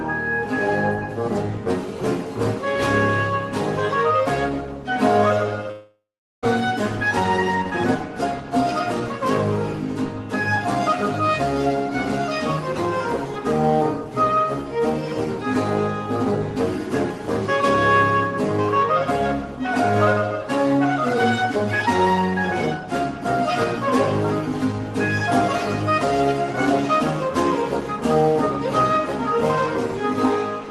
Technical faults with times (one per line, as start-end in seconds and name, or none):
5.71-6.44 long network dropout